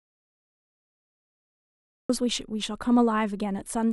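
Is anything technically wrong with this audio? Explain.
Yes. From the start to 2.10 s there is an audio dropout to silence: the input was likely lost, leaving silence, so speech only arrives afterwards.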